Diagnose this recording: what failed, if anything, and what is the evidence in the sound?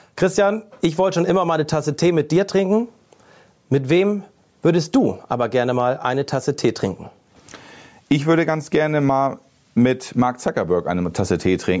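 Gain pumping runs through the whole speech recording. The swing is around 10 dB. Loud and quiet passages sit unnaturally close in level, so the speech sounds squashed. This points to the input stage. The microphone gain was likely set far too high. A fast limiter or compressor then pulled it down on each loud sound and released it in the gaps. The call's microphone processing is audible too, with nothing above 8 kHz.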